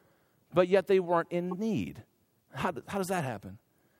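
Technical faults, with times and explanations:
1.51–1.54 s, corrupt frame decoded: after "but yet they weren't", a single damaged compressed frame was played anyway, throwing energy into the wrong frequencies as a brief glitch peaking around -25 dBFS.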